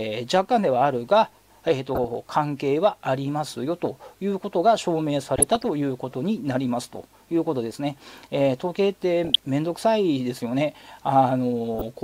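Four bursts of DAB burbling occur at 1.95–2.19 s, 5.36–5.65 s, 9.25–9.45 s and 11.74–11.82 s. Residual bit errors, at a low rate, corrupt MP2 samples and scale factors, so individual sub-bands jump in level, producing brief burbling over the sound.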